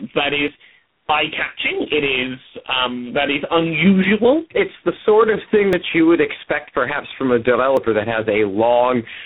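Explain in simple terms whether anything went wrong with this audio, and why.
The speech sounds rough, muffled and warbly throughout. That is tandem speech coding: it was squeezed by three speech codecs in a row, each degrading the last one's output.

Small jumps in the sound occur at 0.48, 5.73 and 7.77 s, and a slightly longer one at 4.04 s. The likely cause is a dropped buffer (overrun), where a tiny slice of audio was lost and the edges joined.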